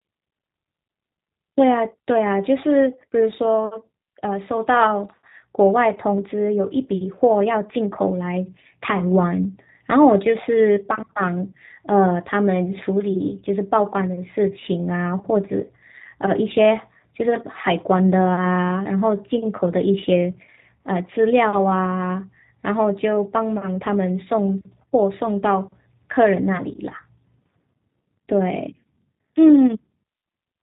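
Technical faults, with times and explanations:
Throughout, G.729 codec: the speech has been squeezed through G.729A at 8 kbit/s, and it shows plainly. Everything above 4 kHz is gone, and since the voice is rebuilt from a tract filter, pitch predictor and a few pulses per frame, it comes out rough and slightly synthetic.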